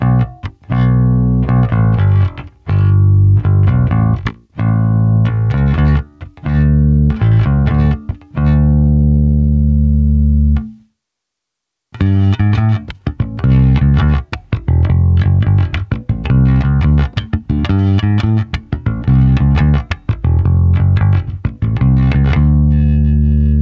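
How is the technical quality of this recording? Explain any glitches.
Gain pumping runs through the whole clip. The gain swings by about 10 dB, ducking under each loud sound, squashing loud and soft parts together. The likely cause is input gain set far too high, with a fast limiter catching every peak. On a waveform the envelope looks flattened, with the noise floor rising between peaks. A spectrogram shows the background band brightening and darkening in step with loud sounds, and an empty region above 8 kHz, which fits the G.722 call codec.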